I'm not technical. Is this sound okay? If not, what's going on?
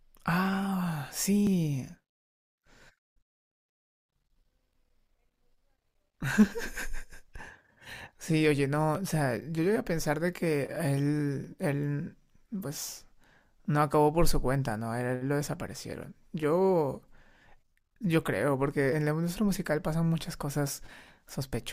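No. The speech has tiny skips, called audio missing between chunks, at 1.47, 8.95, 11.44, 13.94, 16.43 and 21.42 s. A sliver of sound vanishes each time, likely where the recorder closes one 2.5-second piece and opens the next.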